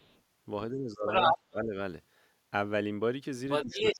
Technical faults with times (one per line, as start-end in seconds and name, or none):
0.00-0.22 other side's voice leaking through
0.71-1.07 speech suppressed in double talk
1.07-1.38 other side's voice leaking through
1.50-1.76 speech suppressed in double talk
3.49-3.96 other side's voice leaking through
3.64-3.99 speech suppressed in double talk